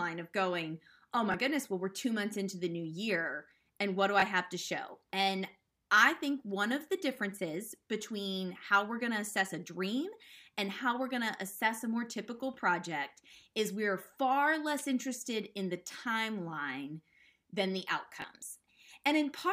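At 1.32, 4.2 and 18.22 s, a repeated buffer replays a 20 ms speech slice when new audio arrives late: a brief click, a duplicated waveform chunk, and a vertical spectrogram seam.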